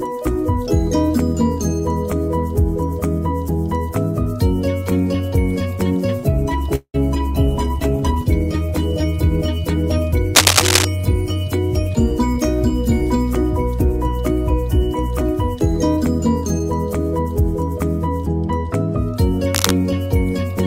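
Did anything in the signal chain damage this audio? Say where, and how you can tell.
Yes. Four kinds of damage are audible, at four different stages.

Network stage: a call audio freeze at 6.75 to 6.96 s. The sound is stretched into a fading tail for about 185 ms, including roughly 70 ms of silence. Then it resumes exactly where it stopped. Nothing is lost, but the delay grows by 185 ms. The likely cause is late packets draining the jitter buffer, so the receiver padded the wait.

Codec stage: a call bitrate drop from 7.33 to 9.10 s. The sound turns coarse and dull, with the top end cut. This fits the encoder falling from 128 kbps to 28 kbps. It stays at that floor for about 1.7 s before recovering. With so few bits, Opus quantizes coarsely and drops high frequencies, which is why it sounds muffled and rough.

Analogue wiring: cable scratch noise at 10.35 to 10.85 s and at 19.55 to 19.71 s. 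Both are dense, irregular crackle bursts laid over the sound. The first sits about 5 dB above the signal. The second is roughly level with it. That texture is likely a worn cable or connector being moved, so its contact resistance flickers.

Buffer stage: jitter buffer speed-up at 14.83 to 16.20 s and 17.19 to 17.76 s. The sound runs faster without any pitch change. It runs about 4 percent fast in the first stretch and 6 percent in the second. Roughly 70 ms and then 50 ms of material vanish. The receiver trimmed short pitch-period slices repeatedly to shrink a swollen buffer and cut latency.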